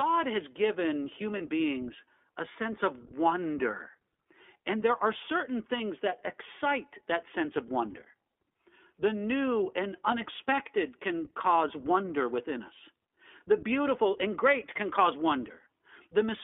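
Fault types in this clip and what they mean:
iLBC codec: Throughout, the speech is narrowband and plainly rough and synthetic, with nothing heard outside roughly 300 Hz to 3.5 kHz. The iLBC voice codec codes each 20 ms frame's excitation independently; the sound fits its 15.2 kbps mode.
lost iLBC frames: Between "has given" and "beings a sense of", at 1.38 to 1.42 s, a 20 ms stretch turns into a held, buzzy or breathy vowel. The decoder filled a missing frame by repeating the last pitch cycle mixed with noise.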